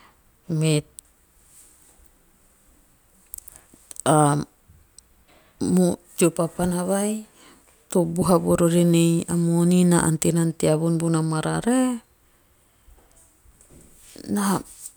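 Nothing goes wrong anywhere in this speech recording, so there's no fault to point to at any moment.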